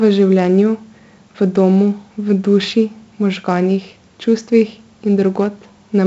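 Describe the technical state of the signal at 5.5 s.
4-bit ADPCM compression affects the speech at 5.5 s, as it does across the entire clip. Each sample is coded as a coarse 4-bit step away from a predicted value, with the step size adapting as the signal moves. The damage here is heavy. A gritty hiss rides on every loud syllable, and sharp onsets distort where the step cannot grow fast enough. Nothing is heard above 7.7 kHz, which fits a 64 kbps stream at 16 kHz sampling.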